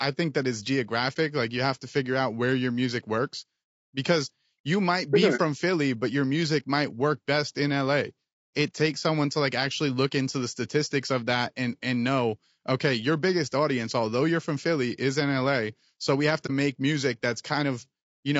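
Across the whole recording the speech sounds rough and grainy, with a hiss sitting between the harmonics and a top band that feels thin and somewhat artificial. This is plainly audible damage, most likely from low-delay AAC compression (AAC-ELD) at a low bitrate, which fits about 32 kbps. Its short frames cannot separate closely spaced pitch harmonics well, and at this rate too few bits remain to fill them cleanly.

Three brief, soft-edged dropouts interrupt the speech: at 1.13 to 1.17 s just after "think that it's", at 5.36 to 5.40 s just after "you might be sure", and at 16.46 to 16.5 s between "we have" and "make music". Each is a short hole of about 30 ms that fades out and back in. This is AAC frame loss with muting, consistent with a single lost frame each time. The decoder replaced the missing spectrum with silence, and the overlapping windows smoothed the edges of the gap.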